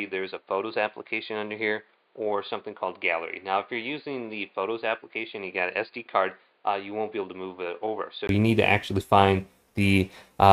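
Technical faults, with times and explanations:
0.0–8.29 s, input switched to a poorer device: the sound is dull and boxy with nothing above 4.8 kHz, noticeably quieter by about 10 dB, and carries its own faint background noise well below the signal. At 8.29 s a 20 ms gap leads into fuller, louder, brighter sound. This likely comes from recording through a lower-grade microphone or a headset's call profile. A spectrogram shows a hard ceiling at 4.8 kHz that lifts after the gap, and the waveform steps up in amplitude.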